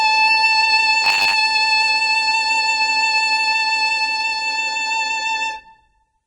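A short music clip with heavy, likely Vorbis compression damage throughout. The treble sounds hissy and grainy, as a low bitrate would. From 1.04 to 1.34 s a robotic sound from repeated short buffers takes over. A rigid 100 Hz buzz appears, fitting 10 ms snippets looped to cover late audio, with about half the sound repeated.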